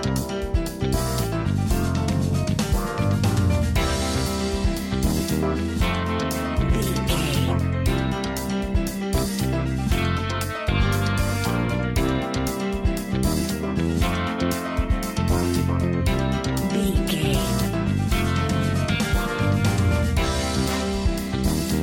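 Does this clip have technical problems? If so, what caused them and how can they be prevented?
No, the signal holds steady throughout with no audible technical faults, so there is nothing here that needs preventing.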